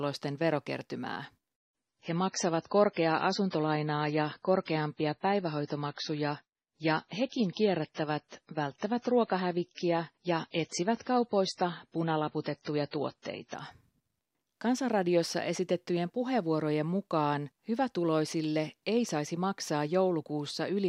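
This is a speech clip with one fault, an adaptive stream at a lower bitrate. From 1.5 s to 13.5 s the quality drops suddenly, with no gap. The treble is gone above 10 kHz, and the sound turns smeared and swirly. At 13.5 s full quality snaps back. The player likely switched to a cheaper version of the stream while the connection slowed. The change fits a jump from about 128 kbit/s to 24 kbit/s MP3.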